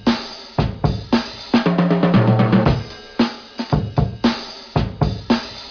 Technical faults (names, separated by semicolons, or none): none